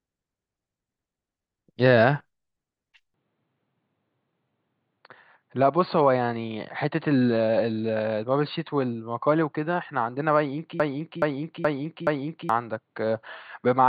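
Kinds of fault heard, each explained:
Input switched to a poorer device: from 3.14 s to the end the speech turns duller and slightly quieter, dropping by about 5 dB, with nothing left above 4.6 kHz and a faint new noise floor sitting far below the voice. There is no gap at the change. This most likely comes from the recording moving to a different, narrower-band microphone or a headset's call mode, whose limited bandwidth and own gain and noise take over for the rest of the clip.
Broken-record loop: from 10.80 s to 12.49 s a single 424 ms fragment of speech plays four times in a row, identical each time, so the sound stutters in place instead of moving forward. The likely cause is a stall somewhere in playback, encoding or streaming, where the last buffered piece kept being resent. Whatever should have been heard in those 1.7 seconds is missing.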